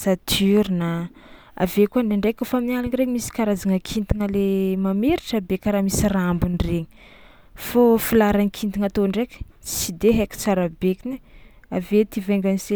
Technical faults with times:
none

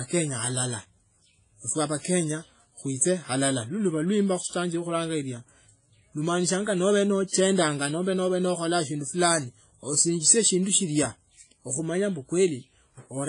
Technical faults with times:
0.00-13.28 WMA compression

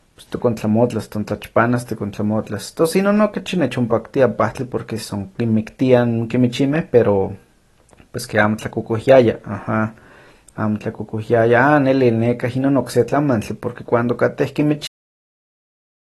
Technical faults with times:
0.00-16.16 AAC compression
14.87-16.16 cut-off end

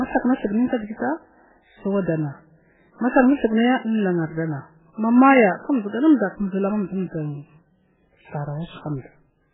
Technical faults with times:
0.00-9.54 MP3 compression

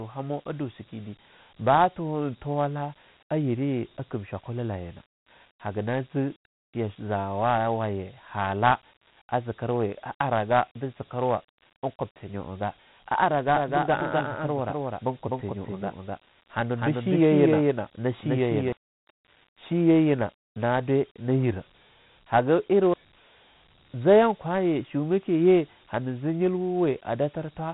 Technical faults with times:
0.00-27.73 Dialogic VOX ADPCM

